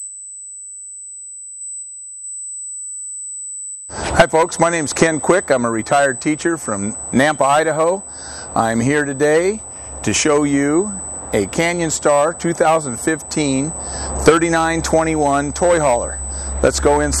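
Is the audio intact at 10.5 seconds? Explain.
No. At 10.5 seconds, as throughout the clip, a steady high-pitched USB whine sits at 8 kHz, only about 10 dB below the signal. It comes from the USB bus drawing current in 125-microsecond microframes, which leaks into the audio through shared power or ground.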